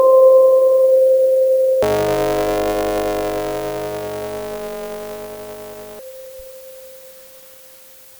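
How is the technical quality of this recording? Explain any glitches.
The music has one glitch. Buffer tearing runs from 1.82 to 5.99 s: the writer and the playback hardware have slipped out of step, so roughly two fifths of each period replays audio about 20 ms old between hard joins. This produces a rattling 100 Hz buzz, which fits a 10 ms buffer period.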